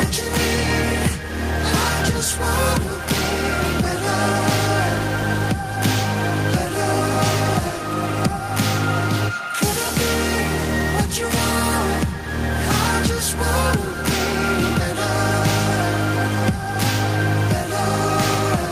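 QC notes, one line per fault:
No faults found. Nothing in the audio calls for a QC entry.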